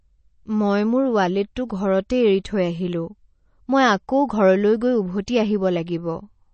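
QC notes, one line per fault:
throughout: MP3 compression. The speech sounds dull and plainly processed, with nothing above 8.3 kHz and an audible watery coding texture. The likely cause is a low-bitrate MP3 encode, around 32 kbps, where the encoder cut the treble and starved weak frequency lines of bits.
1.55 s: pre-echo. Just after "মই মোৰ", a hiss arrives about 10 ms ahead of an attack, which sounds softened. The codec spread the quantisation noise meant for the loud onset back across the quiet instant before it.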